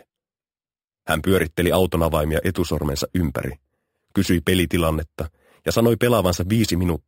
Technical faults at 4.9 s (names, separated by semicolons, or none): imaging from sample-and-hold upsampling